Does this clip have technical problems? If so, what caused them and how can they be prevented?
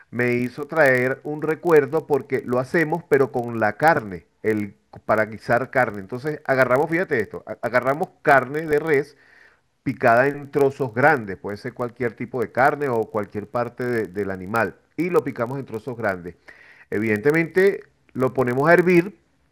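Yes. The speech carries a block size mismatch (padded) throughout. Each 1024-sample read is only partly filled and zero-padded, producing a steady 43.1 Hz buzz and slowing playback to 0.999x at normal pitch. Matching the write and read block sizes between stages prevents it.

DAB burbling appears from 8.67 to 8.73 s as a brief patch of burbling. Weak reception let bit errors, on the order of a tenth of a percent, slip past error correction and corrupt the audio data across a handful of MP2 frames. Stronger reception, through better antenna placement, prevents it.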